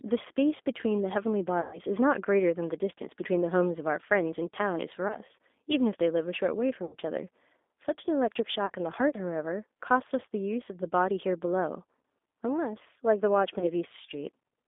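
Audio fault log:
Throughout, G.729 codec: the speech is confined to about 250 Hz to 3.6 kHz and sounds plainly rough and synthetic, because it is rebuilt from a vocal tract filter, a pitch predictor and a few pulses per frame, which fits an 8 kbit/s G.729A stream.
1.61–1.79 s, 5.08–5.16 s, 6.85–6.96 s, 8.66–8.72 s and 13.59–13.65 s, VoIP packet loss concealed by the speech codec: the decoder covers gaps of 120, 20, 80, 40 and 20 ms by extending its last pitch and filter at falling gain. The sound smears into a fading buzz or coloured noise and stays weak or distorted just after each gap.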